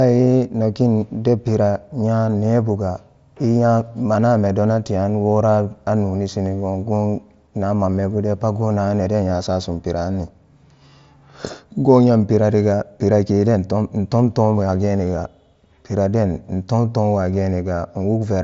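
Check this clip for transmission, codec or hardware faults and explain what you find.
Nothing wrong turns up here; the speech sounds just as it should over a Bluetooth headset link using the mSBC codec, with nothing above 7.7 kHz and only the light grain that codec normally leaves.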